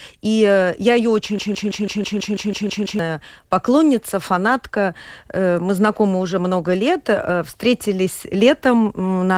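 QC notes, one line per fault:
Throughout: Opus voice compression. The speech is muffled and hoarse, with a faintly robotic edge. The sound suggests a rate near 16 kbps in hybrid mode: a linear-prediction core codes everything below 8 kHz, and a thin transform layer sketches the top band. On a spectrogram, harmonics below 8 kHz look smeared and grainy. Energy above 8 kHz appears as blotchy, quantised patches instead of continuous texture.
1.39–2.99 s: broken-record loop. A 164 ms fragment repeats exactly, back to back, about ten times, giving a stuttering pulse at roughly six repeats per second. Whatever should have played during those 1.6 s is gone. The likely cause is a player or stream stalling and re-sending its last held buffer. The waveform shows one identical envelope tiled end to end, and the spectrogram shows the same short pattern stamped repeatedly, with hard joins at each boundary.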